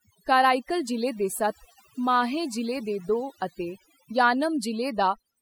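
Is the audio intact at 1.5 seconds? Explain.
No. At 1.5 seconds the speech carries overdone noise removal that runs the whole clip: bands near the noise estimate are gated away, leaving twinkling specks.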